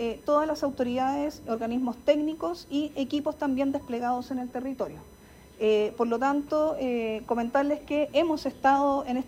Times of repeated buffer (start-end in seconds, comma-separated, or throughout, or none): none